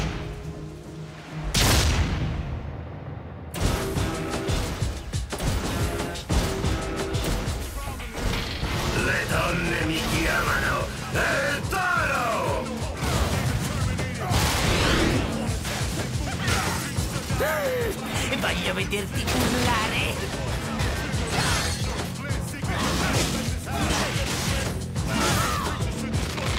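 Nothing here calls for comment, since no technical faults turn up anywhere in the recording.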